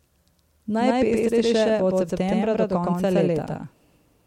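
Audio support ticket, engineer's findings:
Doubled audio track, whole clip. Every syllable repeats about a tenth of a second later, at roughly equal level. The copy is full-band and dry, with no decay or room colour. Likely cause: a second capture through a slower path or two misaligned copies in the edit.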